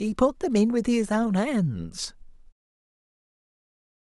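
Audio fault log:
No faults are heard in this speech clip. A smooth fade-out begins at about 2.5 s and completes at 2.53 s, with no click or hard edge as the level falls away.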